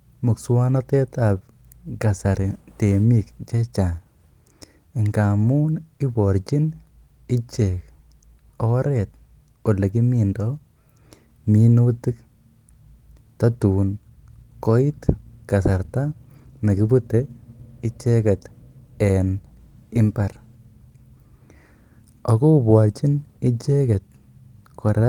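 Nothing stood out as a technical problem anywhere in the recording on listening.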